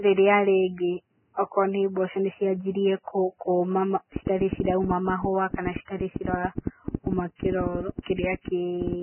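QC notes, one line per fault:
Throughout, Vorbis compression: the speech sounds hissy and grainy, with roughened tones and smeared consonant onsets, likely from a low-bitrate Vorbis encode near 9 kbps. A spectrogram shows nothing above 3 kHz and mottled, noisy patches where harmonic detail should be.
4.16 to 8.94 s, train of clicks: roughly 40 similar sharp ticks at about 9 per second, unevenly spaced, standing out around 10 dB above the signal, likely from interference or a faulty connection. The waveform shows narrow spikes; the spectrogram shows thin vertical lines.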